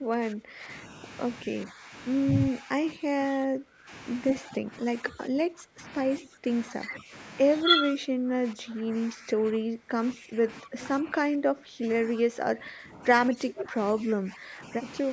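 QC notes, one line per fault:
0–0.7 s, 1.46–1.93 s, 2.51–3.91 s, 4.41–5.86 s, 6.19–7.13 s, 7.65–15.1 s: speech suppressed in double talk. The speech repeatedly dips by about 10 to 20 dB, likely because the echo canceller could not separate the talker from the far-side echo during overlapping talk and turned both down.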